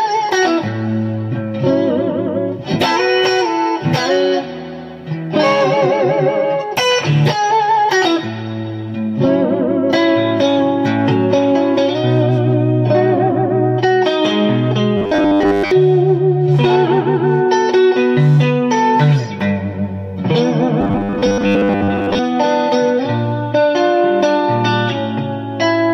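Robotic sound from repeated short buffers hits the audio twice, from 14.97 to 15.71 s and from 20.81 to 22.19 s: a rigid, metallic 100 Hz buzz that still follows the sound roughly. The likely cause is audio arriving too seldom, so about 10 ms chunks are looped to cover most of each gap. The fixed buzz pitch tells it apart from plain dropouts or jitter.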